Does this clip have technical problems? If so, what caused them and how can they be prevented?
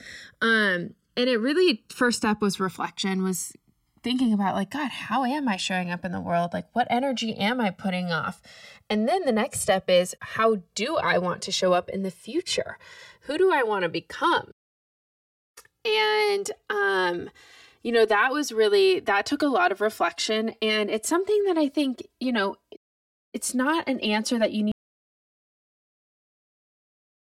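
Yes. The clip has channels drifting apart throughout. The two channels appear to come from devices running on separate clocks, with a mismatch on the order of 100 ppm, so the inter-channel delay grows steadily and reaches roughly 4 ms by the end. Summed to mono, the comb-filter notches from that offset move slowly through the spectrum, which is heard as a gradual flanging on the speech. To prevent it, record both channels on one interface, or lock all devices to a shared word clock.

There is also an audio dropout to silence from 24.72 s that runs to the end of the clip. The speech stops mid-flow and is replaced by digital silence, with no room tone. That points to a lost input, likely a disconnected device, a failed link or an accidental mute, while the recorder kept writing silence. Whatever was said during that stretch is not recoverable. To prevent it, secure cables and wireless links, watch input meters during the take, and run a backup recorder.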